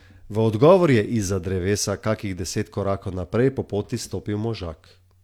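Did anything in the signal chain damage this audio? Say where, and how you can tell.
No, nothing damaged this audio.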